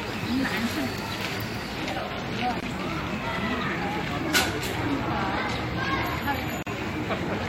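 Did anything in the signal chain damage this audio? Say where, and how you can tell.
Yes. At the codec stage there is a gap at a join of encoded pieces: silence breaks the sound at 2.60 s (24 ms) and 6.63 s (40 ms), four seconds apart. Segments were joined untrimmed, keeping encoder delay and last-frame padding.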